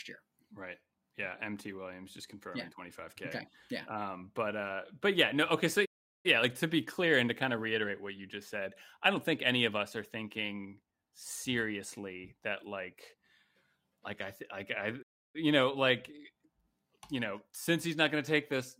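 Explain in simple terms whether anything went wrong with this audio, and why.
A playback stall happens twice: at 5.85 s, lasting about 0.39 s until "like to be clear", and at 15.02 s, lasting about 0.32 s until "you know like". Each time the speech stops dead in mid-flow, goes silent, then carries on. The likely cause is the player briefly running out of audio data, or being held up, so it had nothing to send out until it caught up.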